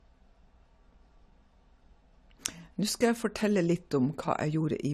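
Throughout the speech, nothing sounds above about 14.1 kHz, and the treble has a dull edge. This is low-bitrate audio saved at a high bitrate: it likely passed through a low-bitrate AAC encode, around 48 kbit/s, before a 256 kbit/s MP3 kept that loss intact.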